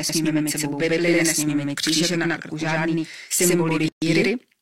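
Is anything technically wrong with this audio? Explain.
Yes, there are two faults.

Throughout the clip there is a channel delay (doubling). One channel runs about 93 ms behind the other, which fits a 4096-sample buffer, and the two are then folded down to mono. Because the offset is long, the ear does not hear it as a tonal change. It hears a second, equally loud copy of the speech trailing the first, like a tight slap echo.

From 3.88 to 4.02 s there is a gap at a join of encoded pieces. The audio was encoded in separate segments and spliced without trimming the silence each encoder run adds at its start or the padding on its final frame. The result is a hole of about 135 ms cutting into continuous speech, with smeared edges. The speech then resumes exactly where it stopped.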